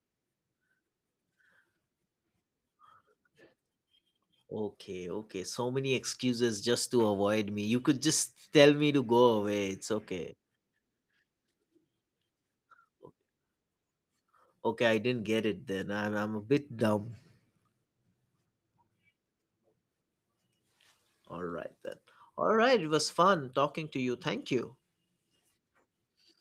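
Nothing in this speech recording stood out as a technical problem on listening.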